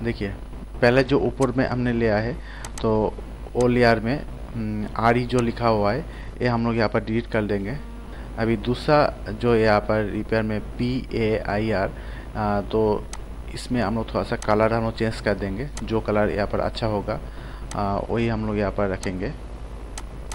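Hard clipping strikes at 0.84–0.89 s, 3.85–3.92 s, 5.06–5.10 s, 9.72–9.76 s and 14.51–14.65 s. Peaks about 1 to 2 dB past the ceiling are sliced flat, and the squared tops throw high harmonics that crackle briefly on each loud moment.

A Bluetooth SBC bit pool drop dulls the audio from 1.00 to 3.20 s, 6.21 to 7.28 s, and from 17.88 s to the end. The treble thins and gritty noise rises, which fits a bit pool cut from 28 to 13 (about 102 kbps) that starves the upper sub-bands.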